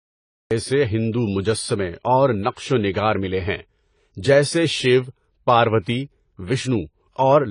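Cut-off start, 0.00 to 0.51 s: the clip opens with silence, and the speech then begins at 0.51 s partway through a sound, with no natural attack or fade-in. The capture started late, so whatever was already under way was chopped off at the entry point. The first audible moment is an abrupt jump from nothing into the middle of an utterance.

AAC compression runs through the whole clip, and the codec damage is plainly audible. Nothing is present above 10 kHz. The cut-off and texture point to AAC-LC at a low bitrate, likely around 24 kbps. A transform codec this starved quantises its frequency lines coarsely against a hearing model. It lowers the bandwidth and either leaves gaps in the spectrum or fills bands with substitute noise, which makes the speech sound smeared and dulled.

Pre-echo, 5.81 to 5.86 s: a short hiss spreads about 56 ms ahead of a sharp attack. The codec spreads its quantisation noise evenly across each block. 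Here the attack falls late in a block, so noise sized for the loud onset also covers the quiet stretch just before it. The hiss runs ahead of the onset, and the attack itself loses its crispness and sounds softened.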